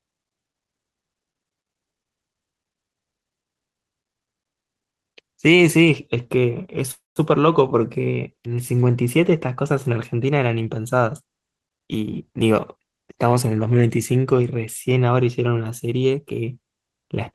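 At 6.91 s a call audio freeze begins: the packets were likely held up and the jitter buffer ran dry. For 0.28 s the last sound is stretched into a fading buzz that becomes silence. The spectrogram shows smeared, flattened bands, then a blank stretch. The audio then resumes where it stopped.

From 12.00 to 13.36 s a jitter buffer speed-up plays the speech at about 118% speed, with no change in pitch. The receiver repeatedly cut short pitch-period pieces, removing roughly 0.3 s in total, so the speech sounds hurried. On the waveform, syllables sit closer together.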